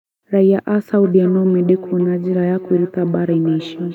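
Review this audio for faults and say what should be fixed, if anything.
Feedback echo between two devices runs from 1.04 s to 3.94 s. The speech returns via a second device's microphone roughly every 300 ms, at most about 15 dB below the original, showing as faint, evenly spaced copies of each burst. To prevent it, mute or disconnect the second device's speaker or microphone so only one device in the room is on the call.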